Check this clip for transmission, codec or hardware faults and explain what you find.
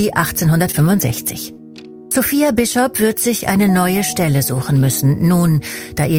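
Two short concealed packet losses, at 0.71 to 0.75 s and 1.53 to 1.59 s. About 20 ms and then 40 ms of the stream missed the decoder, which extrapolated the preceding sound across each gap and crossfaded back, leaving brief smears or wobbles where short details may vanish.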